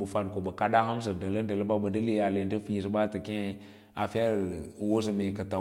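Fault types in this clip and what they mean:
Sample clock jitter: the converter's timing reference wanders, so each sample is taken a few microseconds early or late at random, and the amplitude error is greatest wherever the waveform moves fastest. From 3.25 s to the end of the speech, this lays a grainy hiss over the signal, roughly 35 dB below it, which grows on loud and high-frequency moments and falls away in the pauses.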